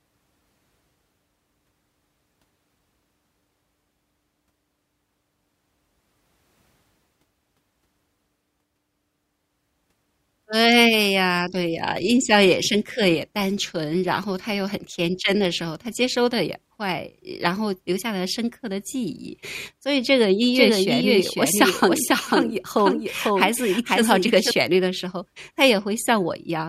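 A second, slower capture path likely doubles the audio track from 20.55 to 24.51 s, so a copy trails about half a second behind, about 5 dB quieter.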